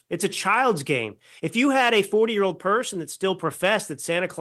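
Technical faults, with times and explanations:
No technical faults are present in this speech recording, and the signal carries through its full span without any audible disruption.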